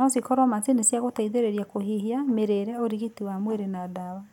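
No faults detected in the speech recording.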